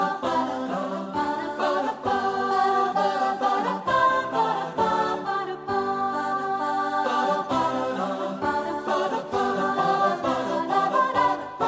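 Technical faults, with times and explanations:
No technical faults can be heard anywhere in the signal, with level, continuity and timing holding steady at every point.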